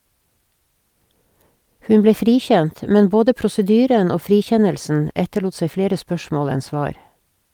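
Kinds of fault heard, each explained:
No technical faults can be heard anywhere in this speech recording, with the signal carrying through without any dropouts, distortion, noise bursts or level disturbances.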